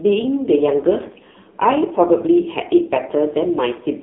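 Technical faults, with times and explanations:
Throughout, AMR narrowband mobile codec: nothing above 3.8 kHz, plus a buzzy, synthetic voice that plain band-limiting wouldn't cause, fitting a low rate near 5.9 kbps.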